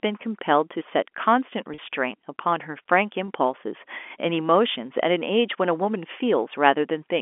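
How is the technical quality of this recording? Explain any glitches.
Two brief packet-loss glitches interrupt the speech, which travels over a G.711 telephone line whose 250 Hz to 3.4 kHz band gives it the narrow phone sound.

Packet loss with pitch repetition at 1.74–1.78 s and 3.27 s: the receiver repeats the last pitch cycle across each gap, giving a short buzzy hold instead of the silent gap a plain dropout leaves.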